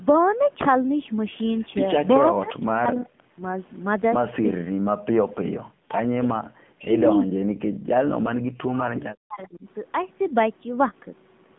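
Throughout, the speech carries AMR narrowband mobile codec damage at 7.4 kbps: nothing passes above 3.8 kHz, and the voice sounds buzzy and synthetic, unlike plain band-limiting. Speech suppressed in double talk is the likely cause of dips at 2.2–3.18, 3.34–3.42, 6.33–6.92, 7.25–7.47 and 8.14–9.65 s. Each falls by about 40 dB, except about 25 dB at 3.34 s, and runs for irregular lengths, unlike fixed-length packet-loss gaps.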